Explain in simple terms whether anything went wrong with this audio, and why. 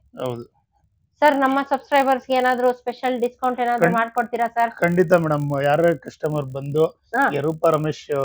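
A steady buzz runs through the whole clip, only while sound is present. The cause is a resampler restarted on every block: each chunk of about 20 ms was converted separately, leaving a small glitch at every seam, 50 times per second.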